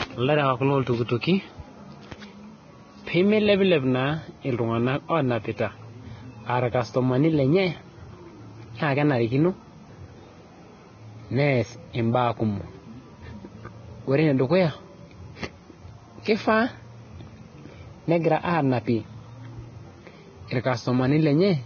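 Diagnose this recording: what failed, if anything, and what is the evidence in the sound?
Vorbis compression throughout, at the codec stage: nothing above 6.5 kHz and grainy, hissy treble, likely from heavy quantisation of the residue at a bitrate near 19 kbps.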